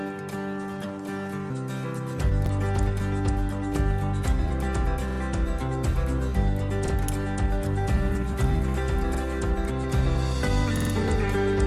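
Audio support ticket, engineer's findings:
Repeated buffer at 2.46, 5.11, 6.87, 9.15 and 10.77 s. The same 46 ms segment replays once, twice at 5.11 s and three times at 10.77 s, with hard joins and no audio lost. A dropout would leave a gap instead. The playback buffer was starved, which fits a 2048-sample buffer.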